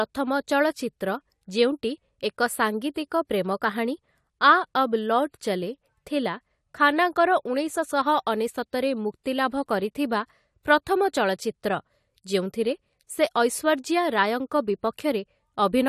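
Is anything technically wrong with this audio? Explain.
Yes. Pre-echo at 9.24 to 9.26 s: the transform codec spread the quantisation noise meant for a loud attack across its block, so about 20 ms of hiss precedes the attack and blurs its onset.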